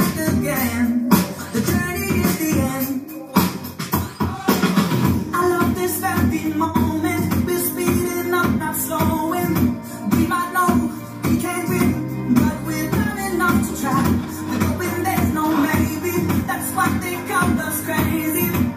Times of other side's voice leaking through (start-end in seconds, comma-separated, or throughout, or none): none